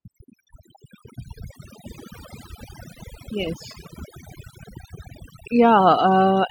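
A noise reduction stage was pushed far too hard, and the overdone noise removal runs through the whole recording. Each time a frequency band sits close to what the processor has judged to be noise, it is pulled sharply down or shut off, and the quieter parts of the speech are caught along with it. Between phrases the background drops to near silence scattered with small twinkling specks.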